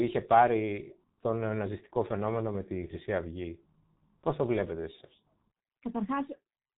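Speech clip carrying the sound of the G.723.1 codec from start to finish, with heavy coding damage. The band stops at about 3.8 kHz, so sibilants and fricatives lose their energy and the voice turns muffled. The codec works on 30 ms frames and refreshes its model of the vocal tract slowly, which smears fast transitions and blurs consonants, while coarse excitation coding adds a hoarse, rough texture consistent with the 6.3 kbit/s mode.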